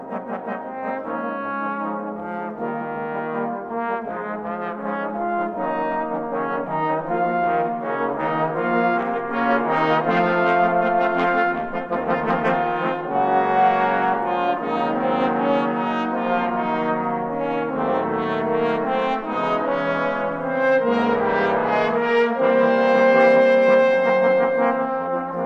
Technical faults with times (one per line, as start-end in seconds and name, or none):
none